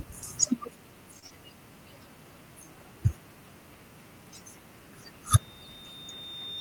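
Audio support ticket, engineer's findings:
Short stall from a late packet, 1.19–1.25 s: sound held about 31 ms, jitter buffer ran dry, stretched last frame, resumed same spot, nothing lost, playout delay now 31 ms longer.

Short concealed packet loss right after, 1.26–1.33 s: 40 ms never arrived, decoder patched it by extending the last sound, brief smear as it blends back.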